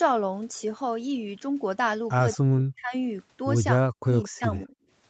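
From 2.32 to 2.36 s a faint scrap of the voice repeats about 193 ms late, around 25 dB below the direct speech. This is an echo leak, likely from a far-end loudspeaker whose echo canceller let some of its microphone pickup slip through.

From 2.38 to 2.93 s and again from 3.9 to 4.76 s the voice sinks by as much as 40 dB. This is speech suppressed in double talk, likely the canceller muting the talker while the other side spoke.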